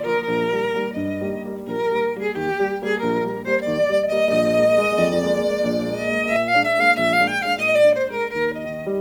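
From 4.28 to 6.36 s the music becomes a doubled audio track: a full-band copy about as loud as the original trails it by roughly 150 ms, likely from a second, slower capture path. Unlike an echo or reverb, it has no decay or room colour and switches on and off abruptly.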